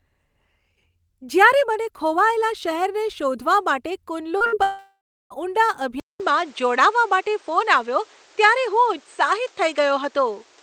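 A speech recording. At 4.37 to 4.42 s there is a brief smear where the sound is stretched over a small hole. This is short concealed packet loss: about 40 ms never arrived, and the receiver bridged roughly 31 ms of it by continuing the preceding sound before blending back. From 4.46 to 4.54 s a held sound fades and the speech jumps ahead. That is a burst of packet loss, about 60 ms gone in a row, which the receiver papered over by extending and fading the last sound rather than playing the real audio. From 4.62 to 5.32 s the sound stretches and fades, then about 330 ms of near silence, and then the speech resumes with roughly 680 ms missing. The likely cause is a long network dropout, where nothing arrived and the concealment ran out before the stream came back. From about 6.00 s to the end, the sound turns duller and boxier after a gap of about 200 ms. Its level shifts by a few decibels, a new noise floor sits around 30 dB below the speech, and nothing remains above 8.6 kHz. 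This points to an input switched to a poorer device, likely a change of microphone or headset profile in mid-recording.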